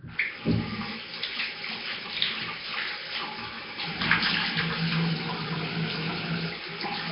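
From start to finish there's a rough, hissy halo and a smeared, underwater feel, with nothing above 5.3 kHz. It sounds like heavy Nellymoser compression, likely Flash-era Asao at a low bitrate, where weak bands were swapped for noise.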